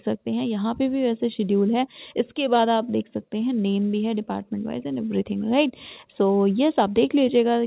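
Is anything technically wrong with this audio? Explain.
No, nothing's wrong here: it's simply come through an ordinary phone-style call link, which keeps everything below about 4 kHz, as you'd expect from that sort of connection.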